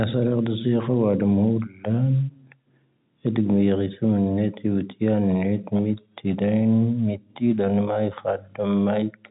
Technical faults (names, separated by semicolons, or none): none